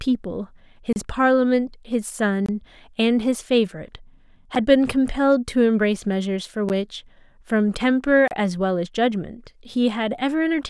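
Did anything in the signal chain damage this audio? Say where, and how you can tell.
Yes. The speech cuts abruptly to dead silence at 0.93–0.96, 2.46–2.49 and 8.28–8.31 s, with shorter dropouts heard as ticks at 4.55 and 6.69 s. These are blocks of digital silence at the driver/buffer stage. Output buffers went unfilled in time; the 6.69 s hole fits a 256-sample buffer.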